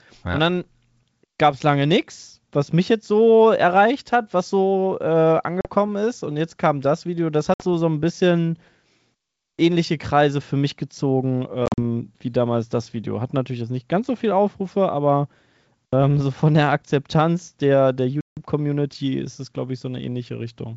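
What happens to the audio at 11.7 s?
Packet loss on an ADPCM call hits from 11.66 to 11.79 s, between "für mich gezogen" and "wie damals das". About 90 ms of speech drops out in hard-edged silent gaps over roughly 120 ms. The longest gap is 40 ms, and around ten short packets went missing. The decoder's predictor and step size lose track of the sender's. So the speech comes back slightly distorted for a moment before it settles.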